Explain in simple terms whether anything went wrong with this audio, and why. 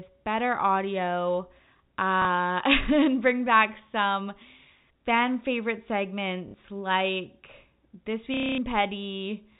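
The speech has three short breaks caused by packet loss with last packet repeated, at 2.22 to 2.25 s, 6.48 to 6.54 s, and 8.34 to 8.58 s. Each time, a piece of audio went missing, and the receiver replayed the last piece it had until fresh audio arrived. You hear a small blip at the first break and a brief robotic stutter at the other two. The last break runs about a quarter of a second and turns into a low buzz. The lengths fit pieces of 30 ms each. Unlike a plain dropout, the sound doesn't go silent. It catches and repeats. All of this sits within the narrow, telephone-like sound of G.711 coding.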